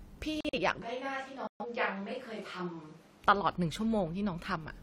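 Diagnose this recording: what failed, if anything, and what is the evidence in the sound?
The codec stage failed twice, with corrupt frames muted. At 0.41 to 0.59 s and again at 1.47 to 1.66 s the speech cuts to silence abruptly for about 0.18 s each time, then resumes with timing intact. Damaged compressed frames were rejected by the decoder and replaced with zeros; each gap's length points to three frames lost. On a waveform these are flat-line holes with hard edges; a spectrogram shows clean vertical blank bands across all frequencies.

From 0.82 to 3.24 s the sound becomes suddenly roomy and hollow, thinner in the bass, roughly 5 dB quieter, and with background noise rising to about 25 dB below the speech. Both the change and the return are instant. This is a switch to a distant microphone, likely after the close microphone's feed dropped out at the capture or wiring stage. A spectrogram shows the low band thinning and a raised noise floor between the speech; the waveform envelope steps down and smears.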